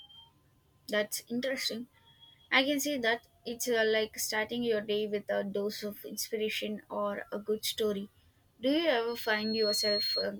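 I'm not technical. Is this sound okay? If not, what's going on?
No. From 9.08 to 10.30 s there is a loudspeaker feedback squeal: the microphone picks up its own loudspeaker, and one pitch, around 4.3 kHz, keeps amplifying itself. It swells over most of a second into a shrill whistle as loud as the speech.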